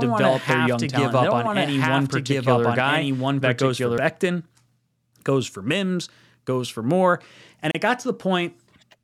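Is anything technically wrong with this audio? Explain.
Yes, there are two faults in this speech clip.

A doubled audio track runs from the start to 3.98 s, ending just after "young talent and they". A second full-band copy sits roughly a second and a half behind, about as loud, with no room colour. It is likely a second capture through a slower path, and it cuts off abruptly.

A gap at a join of encoded pieces opens at 7.71 to 7.75 s, a 33 ms gap with smeared edges. The pieces were encoded separately and joined untrimmed, so encoder delay and last-frame padding remain. The speech then resumes where it stopped.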